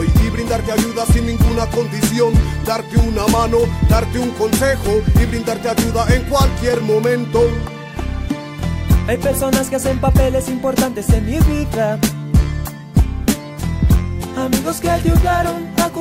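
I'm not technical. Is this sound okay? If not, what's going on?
Yes, this sound is okay. Nothing in it points to a technical problem that needs fixing.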